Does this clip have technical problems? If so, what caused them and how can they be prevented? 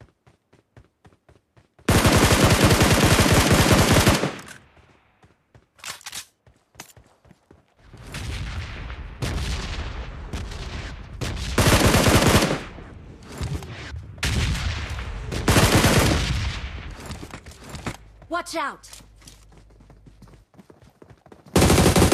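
No, the signal is clean throughout, with no dropouts, distortion or interruptions to trace or prevent.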